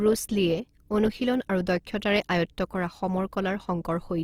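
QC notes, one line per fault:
Throughout: Opus compression, and it's plainly audible. The speech keeps its full top end, with no muffling or narrowing, but voiced tones come across rough and grainy, with a noisy shimmer where harmonics should be clean. That's the likely result of Opus in its music mode, which holds each band's energy while filling starved bands with folded copies or noise. The damage level points to a low bitrate, something like 24 kbps.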